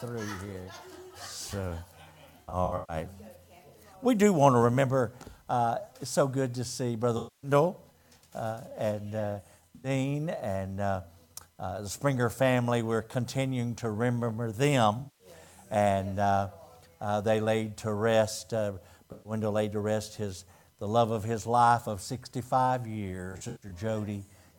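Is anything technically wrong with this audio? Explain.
Yes. AAC frame loss with concealment occurs at 2.42–2.96, 7.17–7.51, 9.75–9.90, 14.98–15.27, 19.12–19.32 and 23.32–23.72 s. The decoder rebuilds missing frames from the last good spectrum, so each gap becomes a smeared, noisy or phasey patch. The first and last patches are broken up into short scattered bursts.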